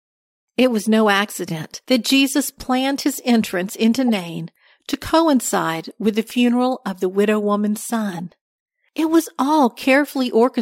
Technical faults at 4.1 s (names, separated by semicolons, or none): corrupt frame decoded